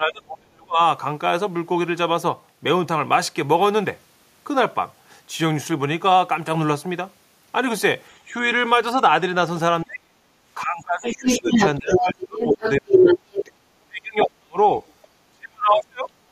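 From 0.0 to 0.8 s, then at 8.29–8.45 s, 9.84–10.13 s, 10.56–13.4 s, 13.82–14.58 s and 15.31 s to the end, the speech is suppressed in double talk. The level falls by tens of dB, most deeply around 40 dB, and the drop at 8.29 s is milder. The likely cause is an echo canceller turning everything down while both sides talked. On a waveform the envelope collapses into gaps, and on a spectrogram the harmonics thin or vanish.

From 11.06 to 13.52 s, and briefly at 14.2–14.25 s, the other side's voice leaks through, likely as loudspeaker echo the canceller missed. The first stretch comes through at roughly speech level and the second is slightly lower. On a spectrogram these show as a second, overlapping harmonic pattern.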